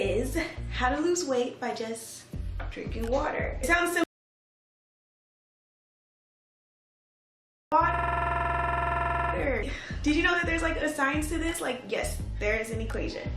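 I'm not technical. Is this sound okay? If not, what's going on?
No. First, an audio dropout to silence: the input signal was most likely lost, perhaps a loose connection or an accidental mute, while recording carried on. From 4.04 to 7.72 seconds the sound stops dead into total silence, and about 3.7 seconds of audio is gone.

Second, a system hang loop: the computer briefly froze while the sound hardware kept replaying its last small chunk. From 7.94 to 9.33 seconds, one 46-millisecond snippet repeats 30 times, about 21 times a second, making a rapid machine-gun stutter.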